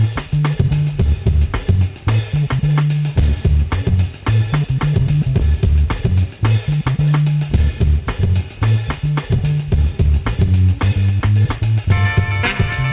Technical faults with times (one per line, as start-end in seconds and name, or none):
none